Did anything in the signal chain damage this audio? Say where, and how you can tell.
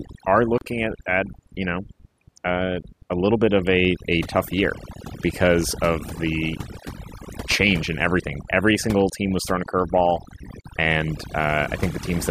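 Yes. Overdone noise removal, from processing, runs throughout: near-silent background with twinkling specks. Unlike codec artefacts, the damage tracks the noise floor, stripping quiet speech detail.

A gap at a join of encoded pieces, from the codec stage, opens at 0.58–0.61 s and 10.61–10.64 s (about 29 and 32 ms). Speech resumes where it stopped, so nothing was lost, unlike a packet dropout.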